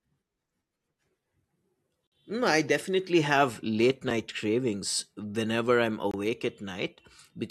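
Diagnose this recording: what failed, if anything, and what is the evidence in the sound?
The failure is at the playback stage, where stream segments are joined: a gap between stream segments. Hard-edged silent holes break the speech at 2.07 to 2.12 s (about 51 ms), at 4.10 s between "I definitely have late" and "cravings whenever I'm" (about 5 ms), and at 6.11 to 6.14 s after "cravings whenever I'm" (about 24 ms). The roughly 2-second spacing matches the segment length. Timestamps leave a gap at each boundary, which the player fills with silence, so no audio is lost.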